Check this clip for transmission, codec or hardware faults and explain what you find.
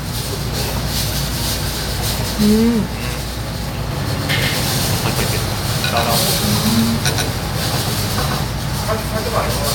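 One fault is present. A doubled audio track runs from 3.91 s to 8.45 s. The same sound is likely being captured twice, once through a slower path, so a second full-band copy trails about 150 ms behind at roughly equal level, with no decay, and it cuts in and out abruptly.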